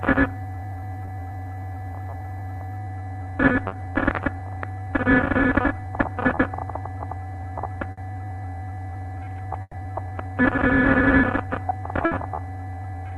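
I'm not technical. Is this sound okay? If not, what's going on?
No. The sound came through an internet call, and parts of it went missing on the way.

There are three moments of short concealed packet loss, at 1.05 s, 3.67 s and 6.35 s. Tiny pieces, lasting 20 to 40 milliseconds, never arrived. The receiver guessed at them by stretching the last bit of sound. You hear a brief smear or wobble.

There are also three bursts of packet loss, at 7.91 s, 9.61 s and 12.05 s. Here longer pieces, lasting 60 to 120 milliseconds, were lost. The receiver held the previous sound and let it fade out. At 9.61 s the fill even drops to silence for a moment. Afterwards the sound resumes further along, and the part in between is gone.

The call connection also limits the highest tones, so nothing above about 12 kHz comes through.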